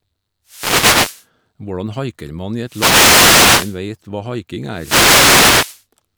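Wireless microphone noise hits at 0.46 to 1.26 s, 2.64 to 3.80 s and 4.71 to 5.84 s: the FM radio link fades, letting receiver static swish over the speech.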